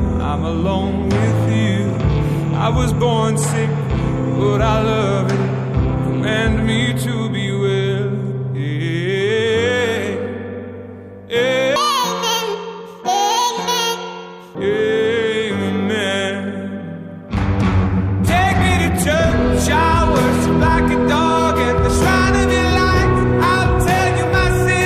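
A section at the wrong speed runs from 11.76 s to 14.55 s: for just under three seconds the audio plays about 1.84 times too fast, so it sounds hurried and raised in pitch by around ten semitones, then drops back abruptly to normal rate. Because pitch and tempo shift together, the likely cause is that segment being played or resampled against the wrong clock rather than any deliberate pitch or time processing.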